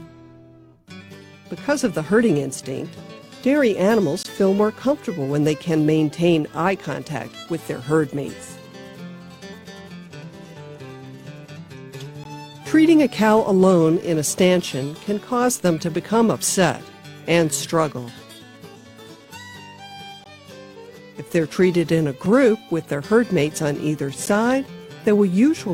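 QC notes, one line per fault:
4.23, 12.24, 20.24, 22.26, 24.26 s, gap between stream segments: hard-edged silences of about 5 to 19 ms fall on 2 s segment boundaries, inserted without losing audio, unlike dropouts.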